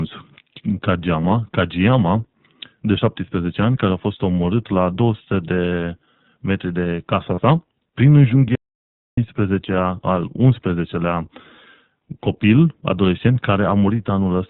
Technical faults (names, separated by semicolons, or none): iLBC codec; lost iLBC frames; audio dropout to silence